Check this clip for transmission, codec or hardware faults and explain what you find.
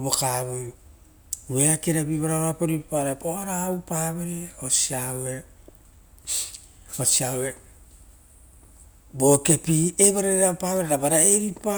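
Nothing here stands out as a fault; the speech comes across steady and intact, with no dropouts, glitches or odd artefacts to flag.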